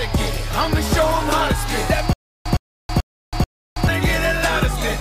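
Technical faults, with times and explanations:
2.13 to 3.88 s, stutter with silent gaps: the same 111 ms burst comes back four times, each followed by about 325 ms of dead silence, so it pulses every 436 ms. That's likely a stalled stream replaying its last fragment on each retry, and the audio meant for that stretch is gone.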